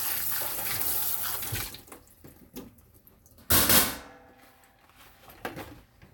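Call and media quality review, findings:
No faults found; audio reviewed in full with nothing to flag for follow-up.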